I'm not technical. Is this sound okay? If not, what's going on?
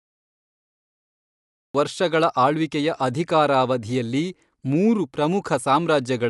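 No. For the first 1.75 seconds there is dead digital silence, and then the speech bursts in partway through a sound, with no natural beginning. This is a cut-off start: the recording began late, after the talking had already started. Unlike a gentle fade-in or a brief dropout in the middle, nothing quiet or gradual leads in, so the first sound arrives already in progress.

The whole clip also sounds dull and rough, with nothing present above about 11.4 kHz, and the damage is easy to hear. This likely comes from Dolby Digital compression squeezing the audio hard. To save space it throws away the brightest part of the sound and fills some gaps with a fine, fluttering noise, which is what separates it from plain muffling by a simple tone control.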